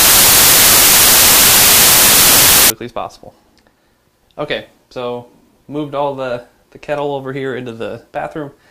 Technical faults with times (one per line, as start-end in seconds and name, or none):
0.00-2.70 samples built from the wrong bytes